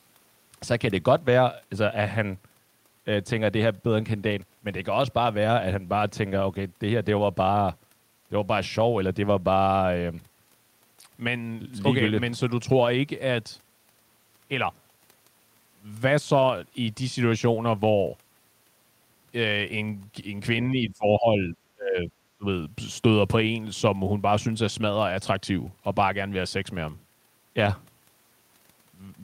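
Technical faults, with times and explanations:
20.71 to 22.11 s and 22.38 to 22.46 s, speech suppressed in double talk: The speech drops sharply, by about 25 dB at its deepest, for roughly a second overall, then briefly again. This is likely an echo canceller treating overlapping talk as echo and turning it down.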